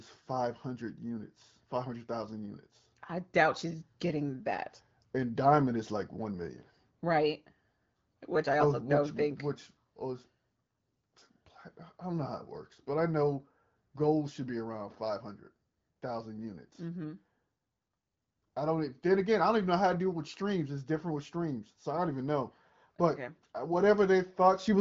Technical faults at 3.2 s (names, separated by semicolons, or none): none